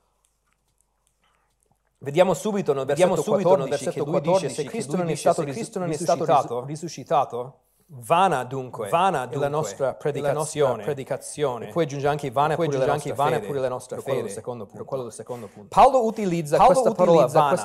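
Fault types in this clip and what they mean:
Doubled audio track: The speech is heard twice. A second copy trails the first by roughly 0.7 s and sounds about as loud as the original. It runs through the whole clip. The copy is clean and full-band, with no decay or room colour, so it sounds like a second playback rather than an echo. This is likely the same signal captured again through a slower path, or two copies left out of step.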